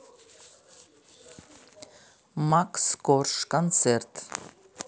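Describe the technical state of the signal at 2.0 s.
At 2.0 s you're inside a run of clock drift buffer slips lasting from 1.28 to 3.73 s. There are about three clicks in the speech, spaced 1.22 s apart. That's likely two clocks a few hundred ppm apart, each slip dropping or repeating a handful of samples.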